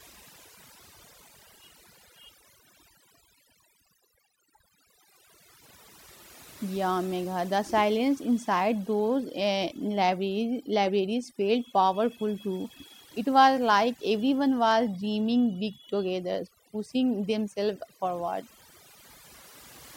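Overdone noise removal runs through the whole clip, from the first second to the last. A noise reduction stage set far too aggressively is pulling individual frequency bands down, or cutting them entirely, whenever their level sits close to its idea of the background noise. Quieter parts of the speech fall below that threshold and vanish along with the background noise. The gaps between phrases drop to near silence scattered with twinkling, chirpy specks.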